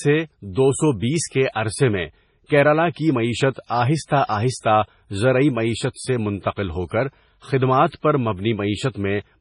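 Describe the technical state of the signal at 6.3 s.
At 6.3 s the speech sounds watery and swirly, with metallic chirps on s sounds, smeared attacks and nothing above 10.5 kHz. This is likely heavy MP3 compression, which fits a bitrate near 24 kbps. Short of bits, the encoder cuts the treble and switches weak frequency lines on and off, and this runs through the whole clip.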